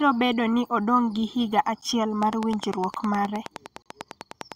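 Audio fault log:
1.81 s and 3.82–3.86 s, gap between stream segments: the speech drops out for about 9 ms at 1.81 s and for about 35 ms at 3.82 s. In both places the timestamps of consecutive 2-second segments fail to meet and the player pads the gap with silence. Nothing is lost, but the sound stops and restarts with hard edges. On a waveform each gap shows as a flat line with abrupt walls. On a spectrogram it is a clean vertical blank band across all frequencies.
2.23–4.53 s, train of clicks: a regular ticking at 9.75 clicks per second, roughly twenty in all, runs over the speech and through its pauses. The pulses peak about 10 dB above the speech and all have much the same shape. They likely come from interference from nearby equipment or a faulty connection or power supply. On a waveform they appear as evenly spaced sharp spikes. On a spectrogram they form a comb of thin full-height vertical lines.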